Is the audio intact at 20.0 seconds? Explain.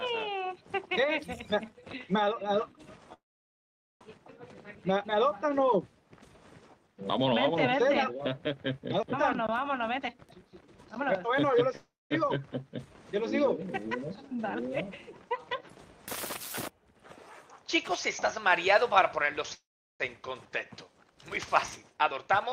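No. A call audio freeze runs from 19.54 to 20.03 s. The sound stops moving forward, and the last moment is carried on as a brief fading buzz that drops into near-silence for about 0.38 s of the roughly 0.45 s gap. The likely cause is packets stalling in transit until the jitter buffer emptied. When they arrive, the audio resumes where it paused, so nothing is lost, but everything afterward plays about 0.45 s late.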